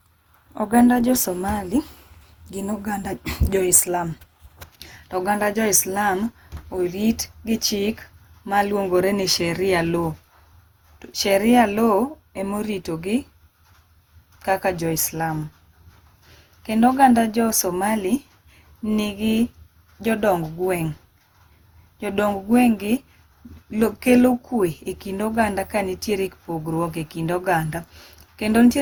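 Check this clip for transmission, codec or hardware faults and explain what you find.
One codec fault runs through the whole recording: generation loss. The speech sounds swirly, smeared and hollow from start to end, and consonant attacks are blurred. The likely cause is repeated lossy re-encoding, around seven passes, consistent with an Opus chain at roughly 64 kbit/s. Each decode and re-encode quantises again on a shifted frame grid, so noise and spectral gaps pile up. Bandwidth stays full, with content reaching about 20.1 kHz. A single pass would keep much cleaner texture.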